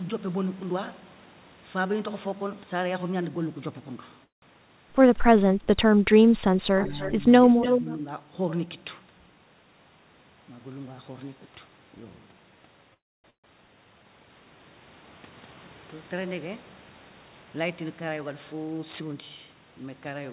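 Speech over a call link, band-limited with nothing above 4 kHz, which points to a narrowband G.711-style path. There are four distinct problems. First, call audio freezes at 4.24 to 4.44 s, 12.94 to 13.26 s and 13.30 to 13.46 s. Each one stretches the last bit of sound briefly and then drops into near-silence, about 160, 290 and 120 ms of it, before the speech picks up exactly where it left off. Nothing is lost, but roughly 180, 300 and 140 ms of extra delay gets added. The likely cause is late packets draining the jitter buffer. Second, there's speech suppressed in double talk at 5.38 to 5.99 s, 6.71 to 7.25 s and 7.81 to 8.05 s. The talker dips by as much as about 20 dB in the first stretch, around 10 dB in the second and only about 5 dB in the third. That's most likely the echo canceller clamping down while both ends were talking at once. Third, echo leak overlaps that same stretch, at 6.81 to 7.12 s and 7.43 to 7.96 s. 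You hear a copy of the speech trailing by about 292 ms, faint at about 15 dB down in the first spot and nearly as loud as the talker, about 5 dB down, in the second. That likely means a loudspeaker on the far end with cancellation that isn't fully removing the mic pickup. Last, a jitter buffer speed-up runs from 17.10 to 19.55 s, where the speech goes about 7% fast at unchanged pitch and sounds a bit rushed. Around 150 ms is trimmed out there in tiny pitch-period slices, with the receiver working off a backlog of buffered audio.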